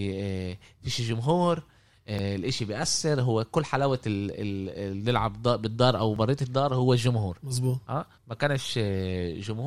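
Likely audio missing between chunks: a segment boundary about every 4 s drops roughly 20 ms, so the speech jumps abruptly at 2.19 s and 6.16 s.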